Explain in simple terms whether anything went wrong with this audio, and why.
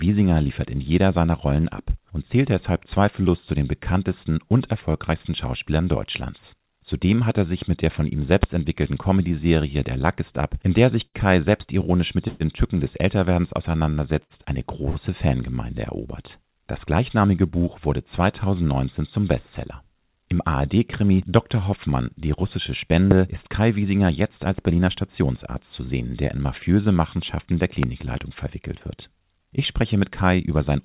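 Yes, a few things went wrong, mostly typical of audio sent over a call connection.

Loud pop: there are three sharp pops, at 8.43 to 8.46 s, 23.11 to 23.14 s and 27.83 to 27.86 s. Each is a single quick click that sits well above the surrounding sound, which keeps playing underneath. The last one is a bit softer than the first two. The likely cause is a sudden electrical jolt, such as a plug, a switch or a bit of static, briefly getting into the signal.

Short stall from a late packet: at 11.06 to 11.21 s, 14.23 to 14.33 s and 14.90 to 14.98 s the sound briefly hangs on itself for about 50 to 75 ms, with a faint buzzy quality. A chunk of audio arrived late, so the receiving end stretched the last bit of sound to cover the wait and then carried on. Nothing gets lost, but things run slightly behind afterwards.

Call audio freeze: at 12.28 to 12.43 s there's a longer hold of about 125 ms, where the sound turns into a fading buzz instead of just stretching. 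The likely cause is a bigger hold-up on the network. The receiver ran out of audio and covered the gap, then picked up exactly where it left off, so nothing is missing. There's just a gap in the middle.

Jitter buffer speed-up: from 24.45 to 25.25 s and again from 29.58 to 30.77 s the sound runs a little fast, about 8 to 9 percent, without changing pitch, so it feels slightly rushed. After the earlier delays, the receiver had a backlog and caught up by quietly trimming out tiny slices, around a sixth of a second in total.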